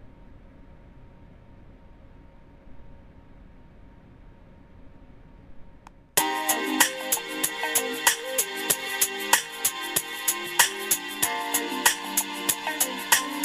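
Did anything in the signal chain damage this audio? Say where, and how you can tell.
Yes. Crude rate conversion damaged the audio at the sample-rate stage, and the damage runs through the whole clip. A gritty, inharmonic fizz rides on the louder and brighter passages and tracks them rather than sitting as a steady floor. That pattern fits a 48 kHz to 44.1 kHz change done by picking the nearest sample, with no interpolation filter. The resulting timing error repeats at a rate set by the two clocks and produces unrelated tones roughly 10 dB below the signal.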